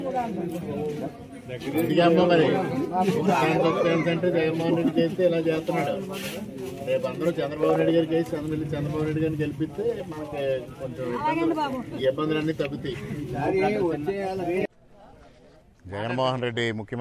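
Nothing in this recording stands out as a technical fault, so there's really nothing to flag here.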